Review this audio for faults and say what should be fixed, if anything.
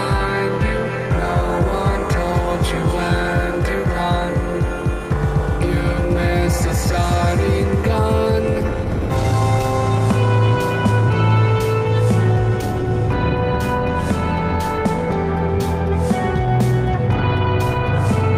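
Nothing in the signal calls for a fix: no dropouts, distortion, glitches or other technical problems can be heard at any point in the audio.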